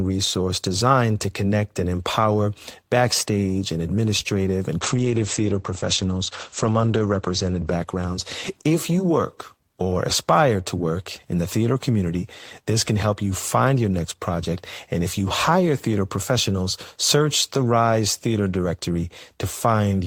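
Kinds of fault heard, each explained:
Call bitrate drop: from 4.81 to 9.74 s the speech turns coarse and muffled, as the encoder's rate falls from 32 to 11 kbps, bottoming out for about 2.1 s. Bandwidth narrows from 20 kHz to 8 kHz, so the speech dulls, then clears as the rate recovers.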